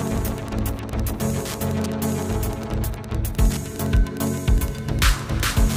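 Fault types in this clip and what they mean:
Wi-Fi interference: The audio circuitry is picking up and rectifying beacon transmissions from a nearby Wi-Fi radio, so a steady tick repeats every 102.4 ms, nearly ten times a second, through the whole clip at roughly 20 dB below the sound.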